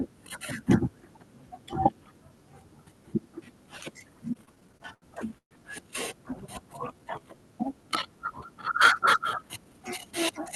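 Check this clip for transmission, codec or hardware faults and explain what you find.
Three jitter-buffer faults stand out, all typical of a call's receive side.

Between 4.33 and 5.53 s the speech drags and catches repeatedly. There are nine short hangs, the longest about 130 ms, and together they stretch about 316 ms, roughly a quarter of that span. These are repeated stalls (stutter): packets arrived late or too slowly, the jitter buffer kept running dry, and each time the receiver extended the last sound, fading it during the longer waits, until fresh audio arrived. Nothing is lost, but the flow stumbles.

From 6.93 to 7.36 s the speech briefly slows to about 87% of its normal speed, with drawn-out sounds and no change in pitch. This is a jitter buffer slow-down. The buffer was low, so the receiver repeated individual pitch periods and snippets of pause many times over, adding about 66 ms to build a reserve before it could run dry again.

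Between 9.30 and 10.41 s the opposite happens. The speech sounds slightly hurried, running about 6% fast while keeping its pitch. This jitter buffer speed-up occurs because the buffer held more audio than it aimed for, so the receiver trimmed many short pieces, each one or a few pitch periods long, around 70 ms in total, to bring the delay back down. The call codec, whose sound fits Opus with content up to 12 kHz, adds only its usual coding noise alongside these.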